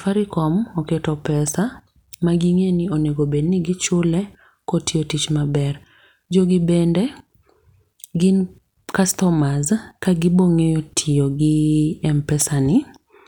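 Speech, with no technical faults to report.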